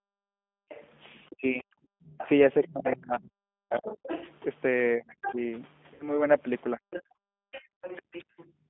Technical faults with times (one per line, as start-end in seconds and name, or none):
0.00-8.69 mains hum
0.00-8.69 G.729 codec
0.00-2.05 background gated by the echo canceller
0.69-5.35 other side's voice leaking through
1.29-8.08 speech suppressed in double talk
5.94-6.28 VoIP packet loss concealed by the speech codec
6.91-8.44 other side's voice leaking through
7.16-8.69 background gated by the echo canceller
7.77-7.81 VoIP packet loss concealed by the speech codec